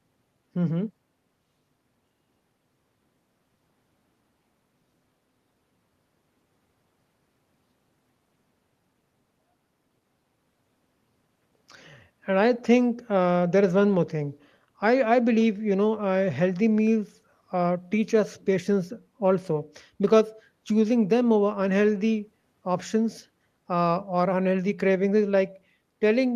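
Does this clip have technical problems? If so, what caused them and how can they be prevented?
No, the speech signal shows no technical problems, so there is nothing to trace back to a cause or to prevent.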